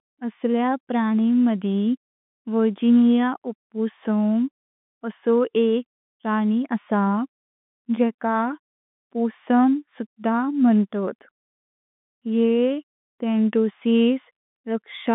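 No faults are audible in the speech, which sits in a telephone band of roughly 150 Hz to 3.6 kHz, consistent with G.711 telephone coding.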